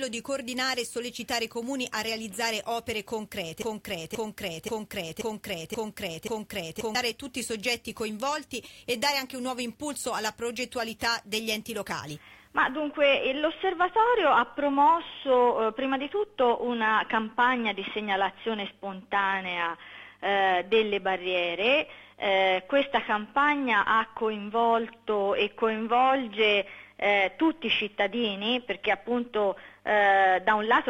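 At 3.62 s the audio catches on a fragment about 0.53 s long and replays it exactly, back to back, six times until 6.95 s, a classic broken-record loop. Whatever should have played across those three-odd seconds never arrives. It sounds like the player, encoder or stream likely stalled and kept pushing out the last chunk it had buffered, and only recovered when fresh data came through at 6.95 s.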